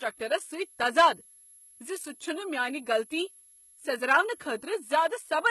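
A switching power supply whistles throughout, its pitch wandering between 10.9 and 11.4 kHz, roughly 30 dB below the speech, heard as a thin, high whine. The treble is likely rebuilt by HE-AAC compression at a very low bitrate, cutting off above 11.8 kHz and leaving s sounds gritty, metallic or lispy throughout.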